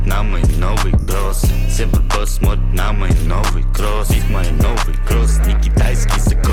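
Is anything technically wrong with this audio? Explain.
Yes, there's one fault. From 1.0 to 1.08 s, about 80 ms of lost LE Audio frames, likely eight 10 ms frames, leave the LC3 decoder repeating the last spectrum with scrambled signs. The result is a brief noisy smear that fades.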